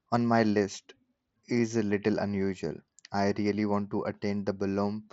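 No technical faults are audible.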